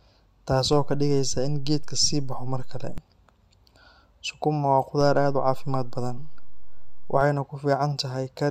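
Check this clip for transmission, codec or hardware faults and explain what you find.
Two DC steps turn up here. The waveform's zero line jumps by about -24 dBFS from 0.73 to 2.98 s, then by about -25 dBFS from 5.01 to 7.21 s, like an offset being switched in and out. Each edge lands as a low thump or click, and the speech runs on underneath unchanged.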